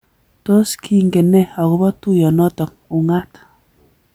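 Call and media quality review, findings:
No technical faults found in the speech signal on review; no component action needed.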